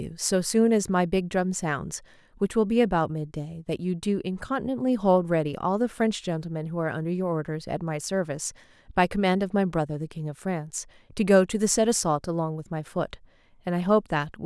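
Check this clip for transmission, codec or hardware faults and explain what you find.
No faults can be heard anywhere in this speech.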